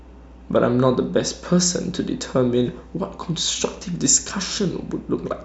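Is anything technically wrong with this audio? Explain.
Yes, there's mains hum under the speech from start to finish: a steady 60 Hz drone with a few low harmonics, roughly 20 dB below the voice. Something like a ground loop or nearby transformer is letting the power line bleed into the signal path.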